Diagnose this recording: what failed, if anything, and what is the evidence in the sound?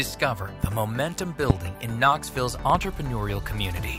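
Loud pops at 0.64 s, 1.50 s (about 20 dB above the signal) and a double pop at 2.70 to 2.77 s, likely electrical pulses from analogue wiring or switching. Unlike dropouts, the sound continues underneath.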